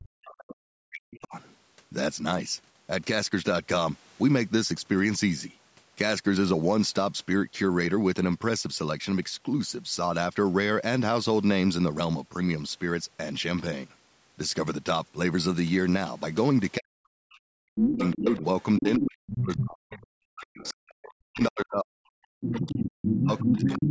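A speech recording from a call, with speech suppressed in double talk from 0.0 to 1.34 s and again from 16.79 s to the end at 23.9 s. The talker dips by up to about 40 dB, fading or breaking into pieces, likely because the echo canceller mistook overlapping talk for echo. Unlike a dropout, the ducking tracks the other side's activity. The other side's voice leaks through briefly at 0.24 s, then at 17.96–19.04 s, 19.57–21.13 s and 22.51–23.9 s, ranging from faint to nearly as loud as the talker. It is a second voice rather than a delayed copy of the talker, so it is likely residual loudspeaker echo, not reverberation.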